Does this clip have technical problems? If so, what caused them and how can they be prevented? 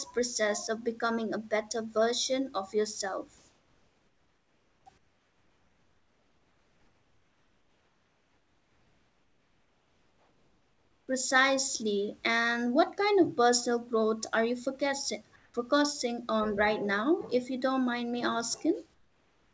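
Yes. There's comfort noise in place of the background during the pauses at 3.38–4.86 s, 4.98–11.08 s, 15.36–15.54 s and from 18.94 s to the end. In each gap the real room hiss gives way to a smooth, featureless noise, about 1 to 6 dB quieter, most noticeably in the long stretch to 11.08 s. The likely cause is discontinuous transmission: the sender's voice detector stops sending during pauses and the receiver synthesises filler noise. Turning off DTX on the sending side would prevent it.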